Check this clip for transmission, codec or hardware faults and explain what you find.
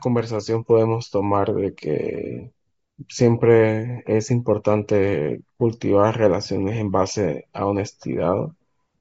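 Yes, there's one fault, running the whole way through the speech. It's likely Bluetooth LC3 compression: a low bitrate, around 32 kbps with short 7.5 ms frames, strips the upper spectrum and backfills it with noise, leaving a plainly audible breathy, grainy edge.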